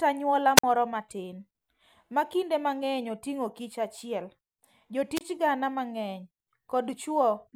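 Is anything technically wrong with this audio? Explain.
Yes. Wireless microphone squelch dropouts occur at 0.56–0.64 s and 5.15–5.21 s: the FM link fades, hiss rises, and the receiver's squelch mutes the speech for about 49 ms and 26 ms respectively.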